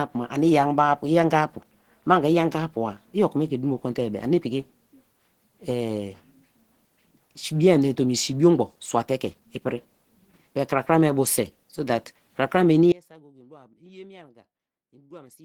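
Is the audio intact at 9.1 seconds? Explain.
No. At 9.1 seconds the speech carries Opus compression damage that runs through the whole clip, likely from a low-rate Opus encode around 16 kbps in its hybrid speech mode. It sounds hoarse and grainy, not swirly with spectral holes as MP3 would, and content still reaches about 20 kHz.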